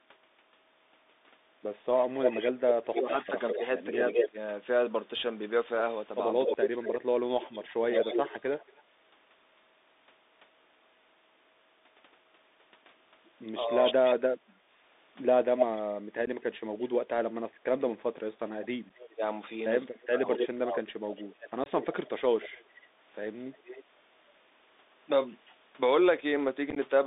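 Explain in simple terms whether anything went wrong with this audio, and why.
Several things went wrong, and most of them come from a phone call made over a Bluetooth headset.

Across the whole 27 seconds of speech, the voice sounds thin, boxy and gritty, with a grainy hiss underneath and scratchy s sounds. That is the Bluetooth CVSD headset codec, the basic phone-call format many headsets use. It keeps only a narrow slice of sound, roughly from 250 Hz up to about 3.7 kHz. It describes the waveform one tiny up-or-down step at a time, so fast, sharp sounds come out rough.

From 1.93 to 8.82 s, and again from 13.82 to 25.54 s, a delayed copy of the voice trails behind the real one. It lags by about a fifth of a second in the first stretch and a bit over a quarter of a second in the second. This is an echo leak. Someone was likely listening on a loudspeaker, their microphone picked the call back up, and their echo cancelling didn't remove all of it before it was sent back.

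Within those same stretches, from 2.84 to 8.71 s and from 13.6 to 22.22 s, the main voice keeps sinking in level or cutting out in patches. Sometimes it nearly vanishes. This is speech suppressed in double talk. Both sides were talking at once, and the echo canceller likely couldn't tell the talker from the loudspeaker echo, so it turned everything down together. The losses add up to about a second and a half in the first stretch and about four seconds in the second.

Tiny abrupt holes appear at 6.54 s, 16.26 to 16.28 s, 18.89 s, 21.64 to 21.66 s and 26.70 to 26.77 s. The last one is a short cluster of gaps. This is unconcealed Bluetooth headset packet loss. Small chunks of sound, each a few milliseconds long, never made it from the headset to the phone. Nothing was filled in to cover them, so the sound simply drops out.

Around 14.54 to 14.66 s, the background room sound briefly dips for about a tenth of a second and then comes back. 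This is background gated by the echo canceller. While the loudspeaker was playing, the canceller clamped the microphone down for a moment, taking the room sound with it.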